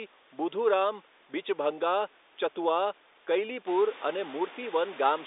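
Nothing goes wrong here: the speech has the narrow telephone-line sound you'd expect, with nothing above about 3.8 kHz, and the room's own background noise picks up by about 14 dB at about three and a half seconds while staying about 20 dB under the talking.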